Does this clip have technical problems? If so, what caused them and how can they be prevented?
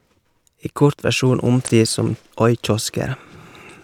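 Yes. A brief glitch cuts into the speech from 1.64 to 1.69 s. This is damaged data in a compressed stream: corrupted bytes there cause the decoder to misread those frames and lose sync until it finds a valid frame header. Protecting the stream with checksums and error-checked transfer prevents this.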